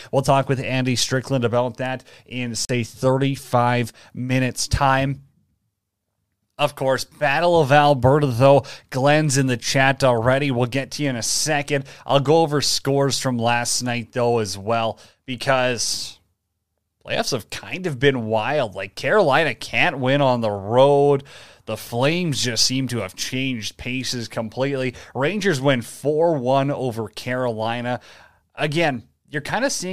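A short speech clip with one Bluetooth stall at 2.65 s: the sound drops to silence for 42 ms, then resumes, likely the headphone buffer running dry while resent packets arrived.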